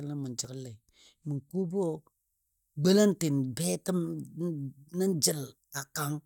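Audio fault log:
0.45 s, compressed frames skipped. About 20 ms of the speech drops out, and the sound jumps ahead. Compressed frames were missing or rejected as damaged by the decoder.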